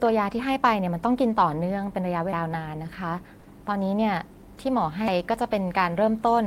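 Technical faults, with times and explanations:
2.33 s and 5.08 s, audio missing between chunks. At each point the speech jumps forward with no gap of silence. Around 300 ms of sound is gone each time. The two sides are butted straight together, so the flow lurches rather than pausing. The skips recur at a steady spacing. This likely comes from a recorder working in 3.0 s chunks and dropping a short stretch while it closes one chunk and opens the next.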